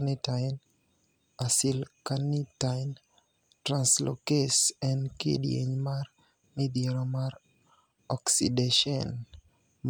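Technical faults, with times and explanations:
No technical faults, with times and explanations, to report for this speech clip.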